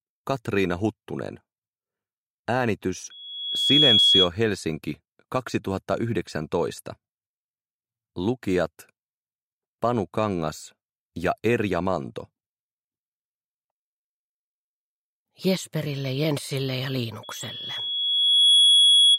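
You've got loudspeaker feedback squeal twice here, both times as a steady tone near 3.4 kHz. The first runs from 3.10 to 4.30 s, swelling up in under a second to roughly ten dB above the audio. The second starts at 17.23 s, builds more slowly over about a second and a half, and is still going when the clip ends. The mic is hearing its own speaker, and at that one frequency the loop gain tops one, so the tone keeps feeding itself.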